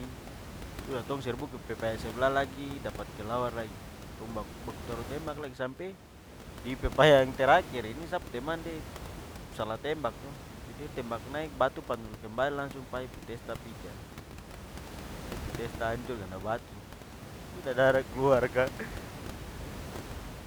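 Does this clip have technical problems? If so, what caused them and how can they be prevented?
No, there are no technical problems to report here.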